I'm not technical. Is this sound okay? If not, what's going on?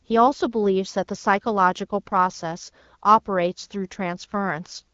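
Yes, no faults heard.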